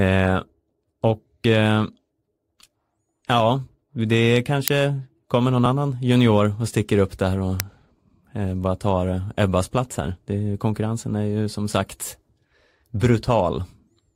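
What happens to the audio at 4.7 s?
At 4.68 s the playback path sent out a block before any audio had been written into it, an uninitialised buffer, so whatever stale values sat in that memory were played as if they were samples. The result is a single, extremely short, very loud crack cutting through the speech. It lasts about 1.3 ms, which fits a 64-sample block, so it registers as a sharp click more than a noise.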